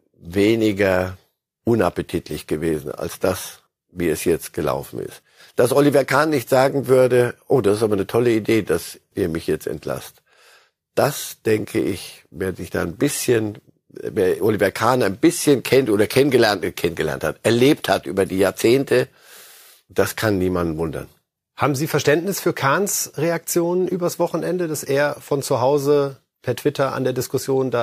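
No technical faults can be heard anywhere in this speech recording.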